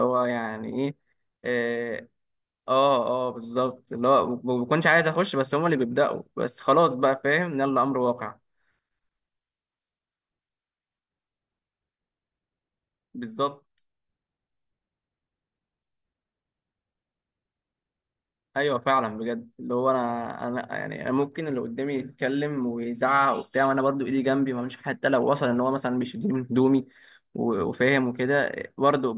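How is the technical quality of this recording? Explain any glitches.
The technical quality of the recording holds up, with no glitches to explain.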